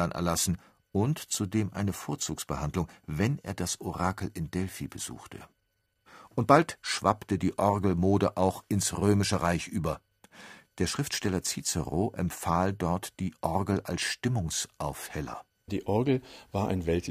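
No technical faults can be heard anywhere in the recording.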